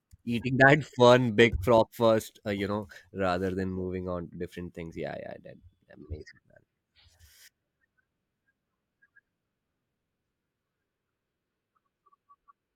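Listening through the speech, nothing stood out as a technical problem at any point.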